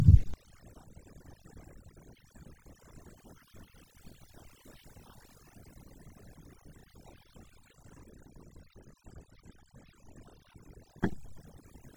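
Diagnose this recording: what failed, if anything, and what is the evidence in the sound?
Overdone noise removal at the call-processing stage, throughout: the suppressor over-subtracts, leaving a near-black spectrogram background with isolated twinkling specks and holes in quiet speech.

Frames out of order at the codec or network stage, at 2.63 to 2.83, 4.03 to 4.22, 7.44 to 7.63, 9.32 to 9.52 and 11.19 to 11.37 s. Each stretch plays two neighbouring runs of about 93 ms with their halves exchanged, which fits four-frame blocks. The exchanged halves are heard as a garbled flutter.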